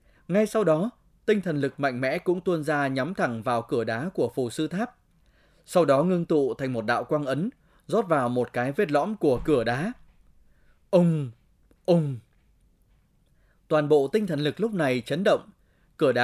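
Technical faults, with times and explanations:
Nothing in the speech recording stood out as a technical problem on listening.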